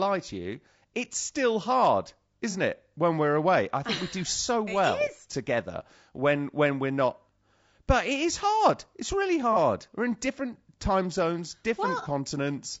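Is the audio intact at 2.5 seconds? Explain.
No. From 2.51 to 2.55 s, just after "you it's still hard", the sound turns briefly smeared and noisy, a short phasey blur lasting about 30 ms before the signal returns. This is AAC frame loss with concealment. A gap of that length fits a single lost frame. The decoder papered over it by reusing the last good spectrum with scrambled phase, which gives a hazy stand-in rather than a true reconstruction.

Underneath this, at 2.5 s as throughout, the voice sounds plainly rough and grainy. Noise sits between the harmonics, and the top band has a thin, synthetic edge. The likely cause is low-delay AAC compression, specifically AAC-ELD at a low bitrate, which fits about 32 kbps. Its short frames resolve pitch harmonics poorly, and at this bitrate too few bits remain to keep the spectrum between them clean.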